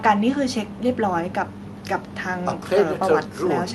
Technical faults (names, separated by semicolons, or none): none